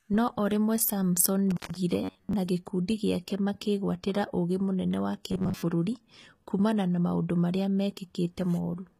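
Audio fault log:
Throughout: HE-AAC compression. Sibilants sound gritty and metallic, and the treble does not line up with the lower harmonics. This likely comes from spectral band replication rebuilding the highs from copied lower bands, which fits a low bitrate around 20 kbps.
1.51 to 1.77 s: intermittent contact. The sound drops out for about 136 ms with crackle at both edges and faint hiss during the gap. A loose cable or plug briefly opened the signal path, then closed again.
2.04 to 2.33 s and 5.32 to 5.62 s: robotic sound from repeated short buffers. The audio turns into a rigid metallic buzz at a fixed 93.8 Hz. This is likely caused by audio arriving too seldom, so the software loops a 10.7 ms fragment and skips most of the real audio.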